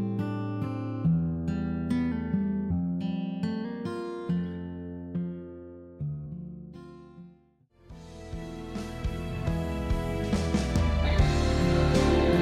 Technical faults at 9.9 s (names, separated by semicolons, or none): none